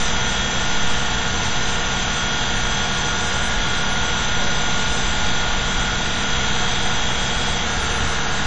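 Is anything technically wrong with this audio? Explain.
Yes. Throughout the clip the audio is ringing and washy, with a hiss that swells and fades with the signal and nothing above 9.8 kHz. The likely cause is WMA compression at a low bitrate, around 32 kbps, with long transform blocks smearing quantisation noise.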